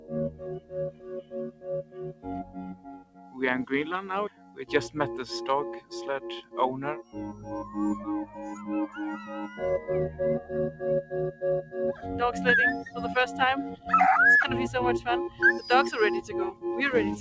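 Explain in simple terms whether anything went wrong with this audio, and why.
Something did go wrong: a noise suppressor applied to music or sounds was left running the whole time. It's built for calls, so it mistakes steady tones and lingering tails for background noise and keeps turning them down, which makes the level swing noticeably and sound pumpy and thin.

You can hear the sound cut by the noise suppressor most clearly from 0.3 to 2.27 s, 2.43 to 3.38 s and 4.3 to 4.64 s, where held parts sink sharply, plus a milder dip at 7.33 to 7.49 s. Sudden hits mostly survive.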